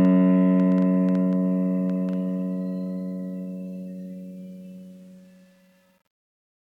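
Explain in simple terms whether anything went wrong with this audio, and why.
A train of clicks runs from 0.05 to 2.14 s: about ten ticks, roughly five a second at an uneven pace, each about as loud as the music itself. That's likely interference from nearby gear or a faulty connection or power supply injecting pulses.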